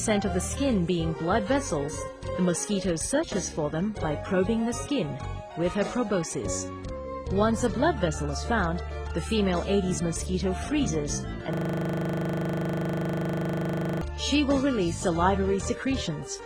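A system hang loop runs from 11.53 to 14.02 s. The playback side froze while the audio hardware kept replaying its ring buffer, so one 40 ms slice repeats about sixty times. That produces a hard, rattling buzz at 25 Hz, which fits a buffer of that length.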